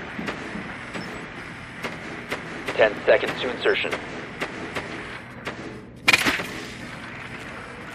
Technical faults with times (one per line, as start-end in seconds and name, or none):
0.87-0.92 overlapping chunks
1.92-1.97 overlapping chunks
2.97-3.02 overlapping chunks
4.02-4.06 overlapping chunks
5.06-5.11 overlapping chunks
6.11-6.16 overlapping chunks
7.16-7.21 overlapping chunks